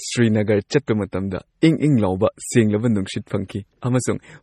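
Throughout the speech, the sound is watery and swirly, with metallic chirps on s sounds and nothing above 14.1 kHz. This is likely MP3 compression at a starved bitrate, fitting roughly 32 kbps. On a spectrogram there is a flat ceiling at 14.1 kHz and speckled, flickering gaps below it.

At 0.69 s and again at 1.61 s, a short hiss runs just ahead of a sharp attack, spreading 18 ms and 13 ms respectively. This is pre-echo: the block's quantisation noise leaks into the quiet moment before the onset. A spectrogram shows a broadband smear preceding the attack, and the waveform shows low-level noise before the transient.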